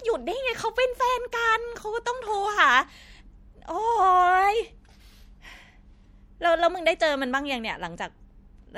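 Speech runs under plainly audible MP3 compression from start to finish. The sibilants turn swirly and metallic. This likely comes from a low bitrate, around 64 kbps. A spectrogram would show faint detail flickering on and off from frame to frame.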